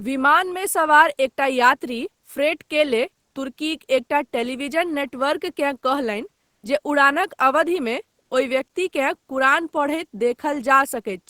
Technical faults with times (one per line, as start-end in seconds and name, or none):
3.27-3.35 comfort noise in place of the background
6.45-6.63 comfort noise in place of the background
8.21-8.31 comfort noise in place of the background